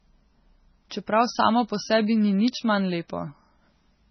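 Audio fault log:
Throughout: MP3 compression, heavy. The speech sounds watery and swirly, with smeared consonant attacks and chirpy sibilants, and nothing reaches above 6.1 kHz. This is likely a starved MP3 encoder, which fits a bitrate around 16 kbps, that cut the treble and let weak frequency lines flicker on and off between frames. A spectrogram shows a hard horizontal ceiling at 6.1 kHz and patchy, blocky holes scattered through the content below it.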